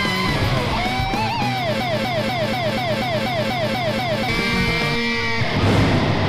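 From 1.8 to 4.29 s, a broken-record loop repeats one identical 0.24 s fragment ten times, likely from a stalled player. Unlike echo, nothing fades.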